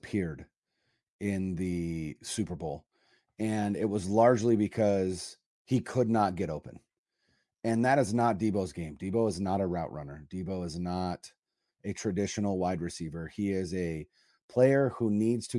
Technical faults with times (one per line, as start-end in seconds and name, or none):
none